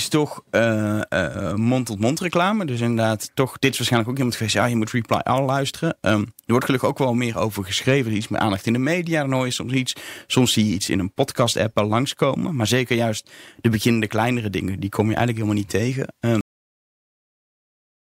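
Speech recording with a cut-off end: at 16.41 s the audio stops mid-sound and falls straight to digital silence without decay, because the final buffers were never written.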